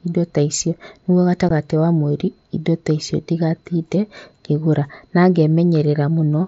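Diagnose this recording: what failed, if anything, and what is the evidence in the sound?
Unconcealed Bluetooth headset packet loss on the wireless link: a 15 ms hole at 1.49 s, after "indo ta icio nĩguo". The gap spans two frames and is filled with silence or an idle pattern, with no smoothed-over concealment.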